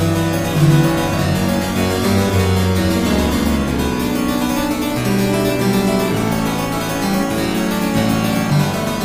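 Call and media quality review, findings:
No audible faults stood out on listening to the clip.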